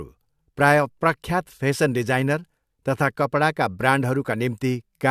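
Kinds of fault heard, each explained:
Nothing here stands out as a fault; it's just a short bit of speech that comes across the way you'd expect it to.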